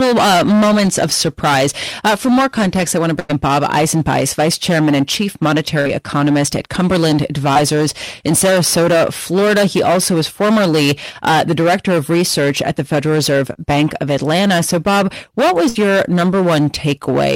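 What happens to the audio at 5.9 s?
A burst of packet loss ends just before 5.9 s, spanning 5.81 to 5.87 s. The receiver stretched the last sound for about 46 ms and faded it down. Playback then picks up later, with about 40 ms of speech skipped.

Hard clipping also runs through this moment, as through the whole clip. The signal is overdriven by about 17 dB, so roughly a fifth of the samples are cut flat. Those flat tops add high harmonics, heard as a harsh fuzz on every loud sound.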